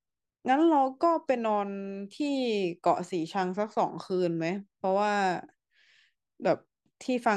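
No technical faults are audible.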